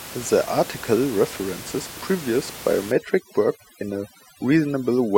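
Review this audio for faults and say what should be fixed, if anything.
Overdone noise removal starts at 2.92 s and runs to 5.18 s. The room noise sits about 15 dB below the speech. Here it drops and breaks up into twinkling specks. Quiet parts of the speech vanish too. Use a gentler reduction setting so the suppression stops short of the speech.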